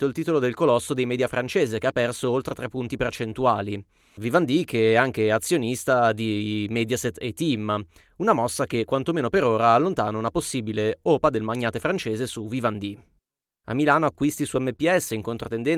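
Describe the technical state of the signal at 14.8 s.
Around 14.8 s the speech briefly hangs. From 14.76 to 14.80 s the last sound is held a little too long, with a faint buzzy or flattened quality, and then the speech resumes exactly where it left off with nothing skipped. This is a short stall from a late packet: the jitter buffer ran dry, so the receiver stretched the sound it already had, filling about 22 ms, until the packet arrived. That pushed everything after it about 22 ms later.

Underlying this moment, and the whole clip, is clock drift between sender and receiver. The timing keeps catching slightly, with small hiccups at uneven intervals where tiny pieces are trimmed or repeated. The sender's audio clock runs roughly 2 percent slow relative to the receiver's, so the jitter buffer steadily drains, and the receiver keeps patching the gaps. A slow sender like this also makes a momentary empty buffer more likely, so the drift is a plausible contributor to the stall at 14.8 s.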